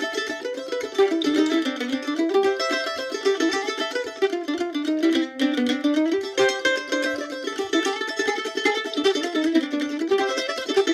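A time-stretched section runs from 7.98 s to the end at 10.94 s. The pace jumps to 1.42 times normal while pitch holds steady, so the sound turns rushed, likely from software squeezing it to fit a length by dropping short slices.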